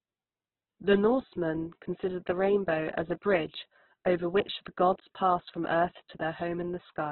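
Speech, and the whole clip has nothing above about 4.1 kHz, so it sounds narrow and phone-like, with a rough, grainy texture where voiced sounds turn noisy. That's likely heavy Opus compression in its music mode, consistent with a starved rate around 8 kbps.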